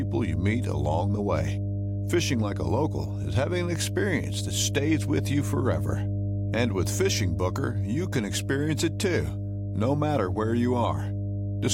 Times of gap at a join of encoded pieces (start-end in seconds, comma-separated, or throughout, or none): none